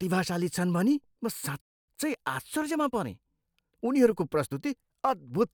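At 1.61 s, just after "भनी म", the speech cuts out mid-flow and the output sits silent until 1.88 s, a gap of about 265 ms. This is a playback stall: the player most likely ran dry of buffered data or had its audio thread blocked, so nothing reached the output until it recovered. The speech then resumes rather than jumping ahead, which leaves the player a backlog to work off.

From 1.88 s to 4.52 s that backlog is cleared by time-compressed catch-up. The player trims short segments out of the stream and cross-fades the joins, so the speech runs at 1.1 times normal speed while keeping its original pitch. To the ear the delivery sounds slightly rushed over those 2.6 seconds, and it settles back to its natural pace once the player has caught up.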